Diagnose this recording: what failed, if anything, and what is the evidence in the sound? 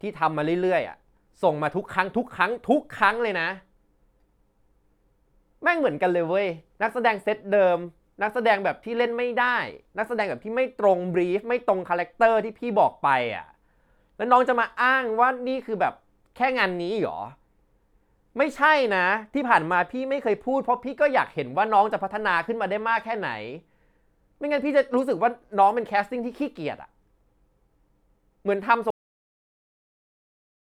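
The failure is a cut-off end, and it sits at the storage or buffer-flush stage. The speech stops dead at 28.90 s, right in the middle of a sound, and from there it's flat digital silence to the end with no decay or room tail at all. That points to the final buffers never being written out or played, so the audio simply halts wherever the last complete block happened to land.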